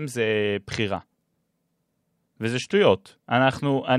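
No technical faults can be heard in this recording.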